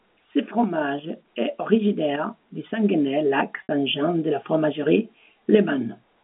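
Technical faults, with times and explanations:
3.63–3.69 s, packet loss with pitch repetition: a 60 ms dropout, bridged by repeating the last pitch period, gives a brief buzzy hold before "de la fromagerie".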